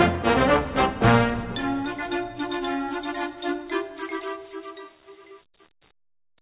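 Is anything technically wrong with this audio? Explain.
Yes. During the fade-out that begins around 4 s, truncation distortion appears from 4.23 s to the end. The fade stage is keeping too few bits, which fits an 8-bit stage without dither. As the level drops, the waveform collapses into coarse square steps. The tail turns gritty. On a waveform, the final seconds look staircase-like. A spectrogram shows broadband grit that tracks the signal rather than a smooth decay. The narrowband call path, empty above 4 kHz, is consistent with G.711.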